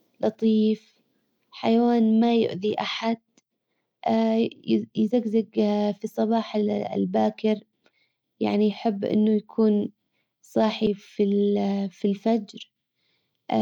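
At 10.86 s the speech breaks with a short tick and a near-instant dropout of only a few milliseconds, after which it carries on from a different point rather than where it left off. This is a CD skip. A knock or a flaw on the disc made the laser jump to another turn of the spiral track, so the player muted briefly and resumed reading from the wrong place.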